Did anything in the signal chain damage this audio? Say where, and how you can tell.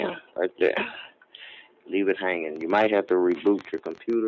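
Yes. A noise suppressor meant for speech was applied to music or sounds at the call-processing stage, and it works on this material throughout. Steady tones and decaying tails are treated as noise and pulled down, while attacks pass. The level therefore swings by roughly 5 dB as the gain rides up and down, giving an audible pumping and a thinned-out quality. The call microphone path itself is band-limited, with nothing above 8 kHz.

The same suppressor also makes deeper, distinct cuts to the sound at 0.21–0.6 s, 1.07–1.34 s and 1.63–1.88 s. The drops reach about 11 dB, 12 dB and 11 dB. In each window, held or fading content sinks or has its decay chopped short, while the onsets survive. The sound appears to collapse into a hole and then recover, which points to the algorithm classifying that stretch as noise and gating it.

A train of clicks runs from 2.56 s to 4.14 s. About 20 near-identical pulses arrive at an irregular pace averaging roughly 11.5 per second, peaking about 5 dB above the program. 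They sit on top of the audio as a ticking rather than following its content. The likely cause is interference in the analogue wiring or a faulty connection or power supply injecting repeated transients.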